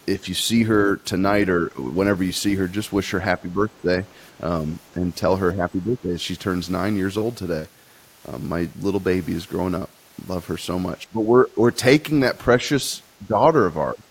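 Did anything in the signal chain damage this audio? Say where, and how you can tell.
Yes, call processing: the speech dips at 1.59, 3.42, 4.95, 5.53, 11.03, 13.19 and 13.92 s, by up to about 25 dB, likely speech suppressed in double talk by the echo canceller.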